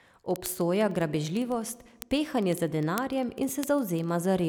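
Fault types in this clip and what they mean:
Word clock ticks: the speech passes through a digital link whose receiver runs on its own clock, about 500 ppm off, so a single sample is slipped roughly twenty times a second. This produces around a hundred sharp, uneven ticks from 0.11 s to 4.44 s.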